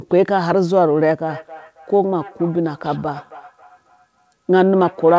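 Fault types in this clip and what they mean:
Feedback echo between two devices: a nearby device replays the call into this microphone; from 1.27 s each sound returns roughly every third of a second, about 20 dB down.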